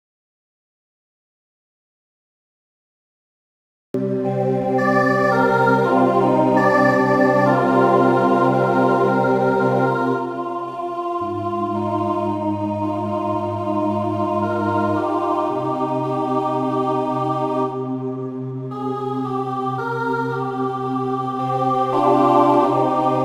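From the start to 3.94 s, an audio dropout to silence: the input was likely lost, leaving silence, a flat waveform and blank spectrogram before sound resumes abruptly.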